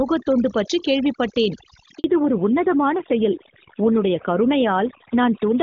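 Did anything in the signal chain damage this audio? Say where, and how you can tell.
Yes. Call processing applied overdone noise removal across the whole clip. The background drops, dotted with twinkling specks. The suppressor is cutting whole frequency bands that sit close to its noise estimate, and quieter parts of the speech go with them.

The network caused a handover gap from 1.98 to 2.04 s. The speech fades out quickly and stays silent for 60 ms. While the call switched links, no speech frames arrived, so that slice of audio is simply missing.

The codec fell back to narrowband at 2.04 s and stays there to the end. Before the switch, the wideband speech is clear, which fits HD Voice at a high rate. After it, nothing above 4 kHz remains, and the speech turns duller and rougher. That points to a low-rate narrowband codec.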